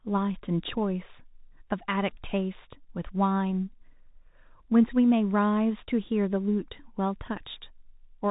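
From start to finish the speech has passed through the Bluetooth CVSD headset codec, which encodes each sample as a single up-or-down bit and adapts its step size as it goes; the plainly audible damage fits the 64 kbps CVSD headset link. Nothing above 3.8 kHz survives, so the speech sounds boxed and narrow. Loud high-frequency sounds outrun the step size and distort, s sounds come out scratchy, and a granular hiss sits underneath throughout.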